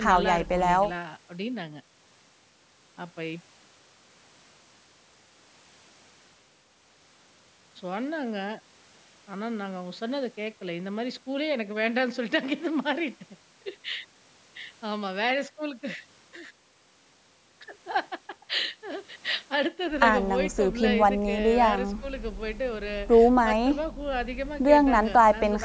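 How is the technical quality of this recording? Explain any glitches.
Nothing stood out on listening to the speech, which carries the normal band-limiting of a call's microphone processing, with no content above 8 kHz.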